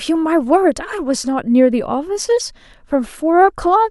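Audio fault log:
No fault is heard anywhere in this speech.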